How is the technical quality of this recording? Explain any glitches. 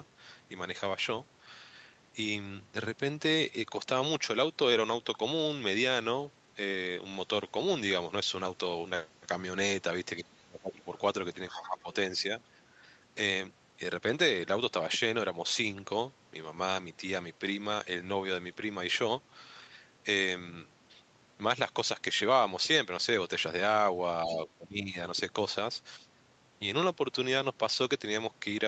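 It's a call recording with a few rough patches where both ends talk at once, and the top end stops around 8 kHz, as you'd expect from a call codec.

Speech suppressed in double talk, 10.22–10.87 s, 11.5–11.89 s, 12.75–12.8 s and 24.26–24.96 s: the talker dips by up to about 20 dB, likely because the echo canceller confused them with loudspeaker echo.

The other side's voice leaks through at 11.49–11.79 s and 24.26–24.36 s, faint at roughly 15–20 dB down, likely echo the canceller didn't fully remove from the mic.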